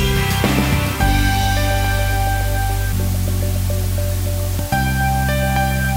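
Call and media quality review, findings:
Low bit depth with dither, whole clip. Constant, even hiss, noise roughly 15 dB below the signal, no distortion. Probable component: a requantisation stage reducing the signal to 5 bits. Dither added before rounding turns the coarse rounding error into steady white noise instead of signal-dependent grit. Fix upstream: keep a higher word length through the chain.

Damaged data in a compressed stream, 2.93 s and 4.59 s. Short blip or chirp at each point. Probable component: the compressed file or stream feeding the decoder. Corrupted, lost or overwritten bytes make the decoder misread or reject frames, lose sync, and hunt for the next frame header, producing the brief artefact. Check transport integrity and container or stream muxing.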